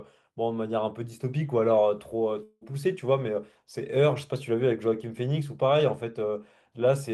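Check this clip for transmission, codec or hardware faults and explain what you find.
One fault stands out: a long network dropout from 2.43 s to 2.63 s. For roughly 0.2 s the sound is replaced by a buzz- or hiss-like continuation of the preceding audio that fades rather than dropping to silence, which covers the whole gap. It is likely that packets stopped arriving and the receiver's concealment extended the last received sound to bridge about 180 ms of lost audio. The speech then resumes with that portion missing.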